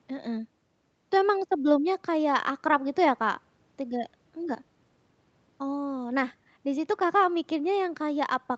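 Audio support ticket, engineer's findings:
No fault found; 8 kHz ceiling from call processing.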